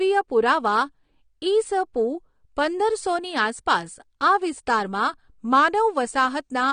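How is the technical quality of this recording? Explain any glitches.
The technical quality is held back by clearly audible compression damage running through the whole recording, likely from AAC compression. Nothing reaches above about 9.7 kHz, so the speech sounds dull, and sibilants carry a fizzy, warbling smear. At a low bitrate, which the damage here suggests is around 32 kbps, the encoder discards detail it judges inaudible and lowers its bandwidth. A plain low-pass filter would dull the top end without that shifting, watery texture in the remaining bands.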